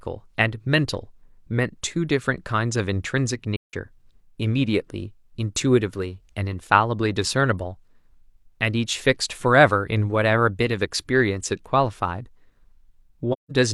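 A run of AAC frames fails to arrive and the decoder mutes them, zeroing their spectrum, so the speech drops out in a soft-edged hole of about 170 ms, a length that fits four lost frames. It happens twice, from 3.56 to 3.74 s and from 13.33 to 13.52 s. The overlapping transform windows fade the sound down into each gap and back up out of it, so the AAC frame loss with muting leaves a smooth silence.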